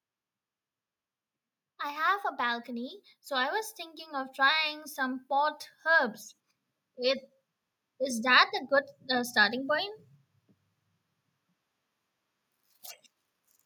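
A speech recording with automatic gain rising between 1.82 s and 6.14 s. Over those four-plus seconds the level climbs steadily by about 6 dB, and the background noise swells in step with the voice. That shared rise identifies the cause: an automatic gain control judged the input too quiet and slowly raised its gain, lifting everything in the signal path rather than the speaker alone.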